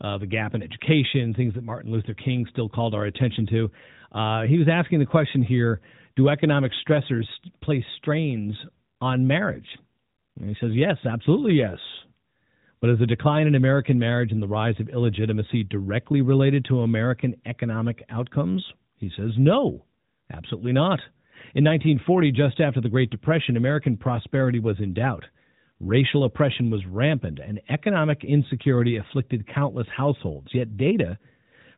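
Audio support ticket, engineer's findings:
No faults found in this speech.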